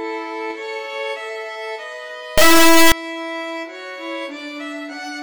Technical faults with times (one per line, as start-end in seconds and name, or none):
2.38-2.92 integer read as float